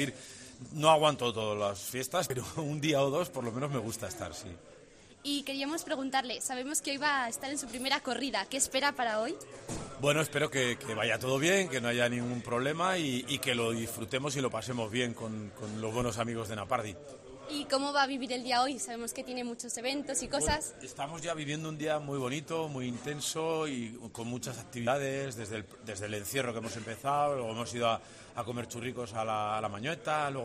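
The audio jumps forward at 2.30 s and 24.87 s. These are compressed frames skipped: roughly one 92.9 ms frame of audio is dropped each time.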